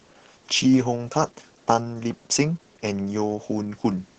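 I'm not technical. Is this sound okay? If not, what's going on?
No. Opus voice compression squeezes this speech hard throughout. Sound above 8 kHz is gone, so voices come out muffled, hoarse and slightly robotic.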